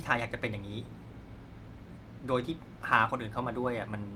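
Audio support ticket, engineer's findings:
No faults found in the speech clip; nothing to attribute to any component, no action required.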